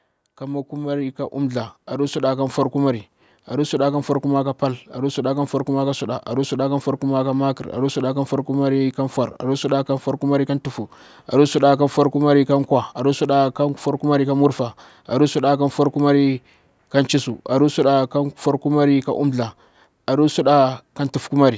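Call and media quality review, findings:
Automatic gain rising, 0.39 to 8.37 s, ending just before "kumari ka". Speech and background swell together, about 10 dB. Slow ramp, roughly 8 s. Component: call-path AGC. Mechanism: input judged too quiet, gain raised gradually. Band stops near 8 kHz, consistent with call microphone processing.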